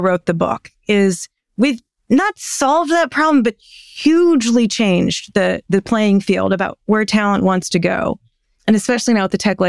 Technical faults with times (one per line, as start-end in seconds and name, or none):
none